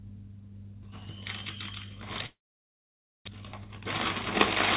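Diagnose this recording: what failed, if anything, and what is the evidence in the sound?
At the network stage, audio stops from 2.26 to 3.29 s: a brief fading continuation of the last sound, then near-silence, likely a long network dropout. About 760 ms never returns, unlike a mere stall, and playback resumes with roughly 0.2 s more delay.

A jitter buffer speed-up follows from 3.37 to 3.80 s. The receiver trims pitch-period slices, about 70 ms in total, so the sound runs about 115% fast at unchanged pitch. This distinguishes it from a clock or resampling error, which would shift pitch.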